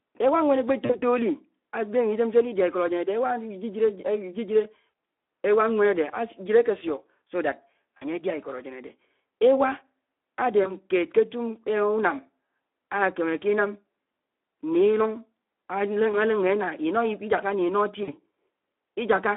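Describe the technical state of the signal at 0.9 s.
At 0.9 s the signal sits inside a VoIP packet loss concealed by the speech codec, from 0.85 to 1.02 s. About 40 ms of audio never arrived, which fits two lost 20 ms frames. The decoder filled the gap by repeating its last pitch and spectral filter, with the gain stepping down each frame. The result is a short, smeared buzzy tone or coloured noise that fades. Because each decoded frame builds on the one before, the sound stays thin and distorted for a moment after the gap ends.

Under this, the whole clip carries the Speex codec at plainly audible damage. The sound is hoarse and grainy, with a rough edge. That level of coarseness points to a low-rate mode near 11 kbps. The excitation gets too few bits to capture fine detail. The band runs only from 250 Hz to 3.4 kHz, giving a narrow telephone-like tone with no low body and no air on top.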